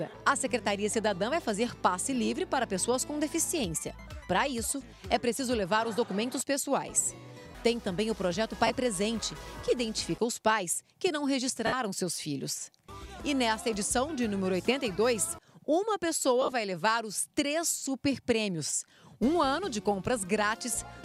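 Lost LE Audio frames break the audio at 8.67–8.70 s (30 ms), 11.67–11.73 s (60 ms) and across 16.42–16.52 s (60 ms in short bursts). The LC3 decoder refills gaps with the last spectrum, signs randomised, so tones smear into noise instead of dropping to silence.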